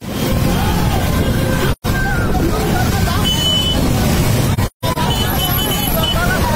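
At 1.72 s the sound fades away and returns by 1.86 s, a hole of about 128 ms that points to three consecutive AAC frames missing. At 4.53–4.98 s further losses scatter across about 430 ms, totalling 256 ms, with the longest gap around 150 ms. This is AAC frame loss with muting: the decoder zeroes the lost spectra, and the overlapping windows taper each edge, so the gaps are soft-edged, unlike a hard sample dropout.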